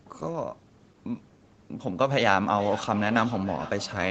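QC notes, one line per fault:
2.56–4.1 s: feedback echo between two devices. From 2.56 s to the end the speech returns roughly every 0.4 s, thinner and ringing, peaking about 14 dB below the direct speech, as a second device's playback re-enters the other device's microphone and is sent back uncancelled.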